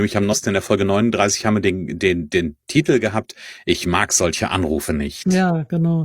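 From 0.28 to 0.35 s, just before "in der", there is damaged data in the compressed stream. Part of the coded data was corrupted. The decoder misreads those frames and loses sync while it hunts for the next valid header. The result is a brief chirp, squawk, click or short hole.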